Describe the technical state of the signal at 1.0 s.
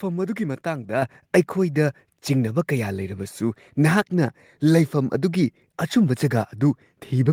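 At 1.02 s the speech and the background noise jump up together by about 7 dB in a single step: a microphone volume stepped up, the call software raising the device's input level at once.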